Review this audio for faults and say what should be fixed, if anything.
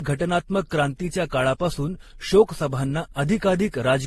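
Throughout the speech, nothing sounds above 12.1 kHz, and swirly, smeared artefacts stack up, which is likely transcoding between lossy codecs; a spectrogram shows a flat ceiling and patchy holes. To prevent it, encode once from the original source.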